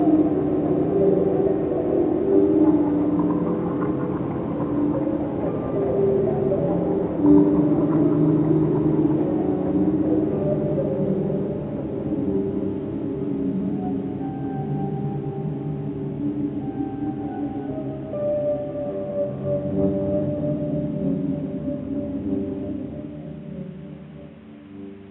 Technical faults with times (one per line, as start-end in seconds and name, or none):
none